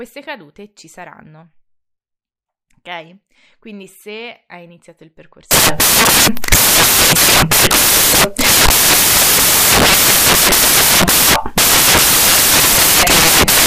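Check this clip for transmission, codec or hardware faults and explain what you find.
One fault is present, and it runs to the end of the speech. Samples built from the wrong bytes, from 5.51 s after "se hai iniziato il": misassembled bytes push the fast-changing low bits into each value's high part, so the speech becomes loud, harsh broadband noise, close to white on loud sounds.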